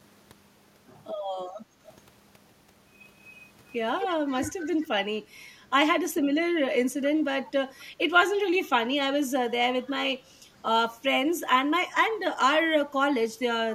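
Right at 1.65 s the background gets gated by the echo canceller. From 1.65 to 1.8 s the room tone sinks by about 7 dB for roughly a sixth of a second, then comes back. That's the canceller deciding the far-end loudspeaker was active and clamping the mic hard, so the ambience briefly dips out from under the voice before the canceller releases.

After that you get echo leak, a delayed copy of the voice trailing the original by 253 ms. The first is a tiny, faint scrap at 1.88 to 1.93 s, well down in level. The big one runs from 4.0 to 4.88 s, only about 10 dB under the speech, so it's clearly audible. Two more very quiet flickers turn up at 7.71 to 7.84 s and 9.86 to 9.91 s. The likely cause is a loudspeaker-side echo canceller not fully removing what its mic picked up, so the residue gets sent back.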